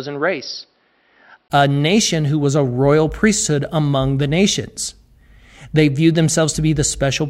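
For the first 1.5 s the system was likely capturing from an input switched to a poorer device, before changing back to the main microphone. That opening stretch carries nothing above 5.6 kHz, so the speech sounds dull and boxy. It is also somewhat quieter and sits over a faint background noise of its own. At 1.5 s a 20 ms gap marks the switch, after which the sound opens up to full brightness.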